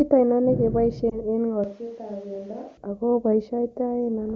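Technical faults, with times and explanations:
1.10–1.21 s, lost AMR speech frame: a brief dip or warble in the speech. A single 20 ms frame failed its checksum, so the AMR-WB decoder filled the gap by reusing the previous pitch and vocal tract settings at lowered gain. The speech resumes weak or rough for a moment.
1.64–2.77 s, switch to a distant microphone: the speech abruptly turns roomy and hollow, thinner in the bass and about 10 dB quieter, with room noise rising to roughly 25 dB below the speech, then snaps back. The close microphone likely dropped out and a farther one took over.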